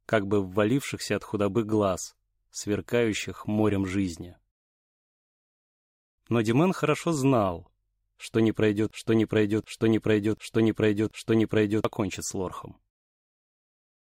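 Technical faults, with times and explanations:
8.91 to 11.85 s, broken-record loop: the player, encoder or stream likely stalled and kept resending the last fragment it held, so a 735 ms piece of sound repeats exactly, back to back, four times, and the audio due in those three seconds never arrives.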